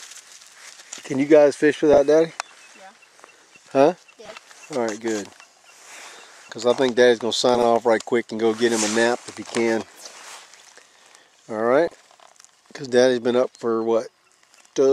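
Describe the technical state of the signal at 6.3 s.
The signal is intact at 6.3 s, with no audible fault at that moment.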